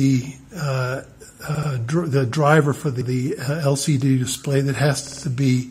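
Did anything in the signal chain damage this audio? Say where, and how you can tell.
Yes. There are three short stutters, where the same slice of sound plays again back to back: at 1.54 s a 78 ms block plays three times in all, at 3.01 s a 105 ms block plays twice, and at 5.07 s a 52 ms block plays four times. These are repeated frames at the codec or storage stage. A run of compressed frames was written or sent more than once, and the decoder faithfully replays it. The block lengths fit runs of roughly two to four compressed frames, and the clip is longer by about 0.42 s in total.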